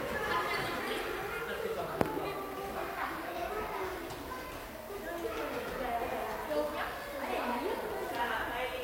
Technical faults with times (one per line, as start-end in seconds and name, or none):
0.00-8.83 low bit depth with noise shaping